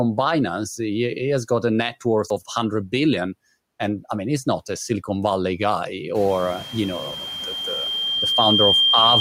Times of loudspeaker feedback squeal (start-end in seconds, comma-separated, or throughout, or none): 6.30-9.21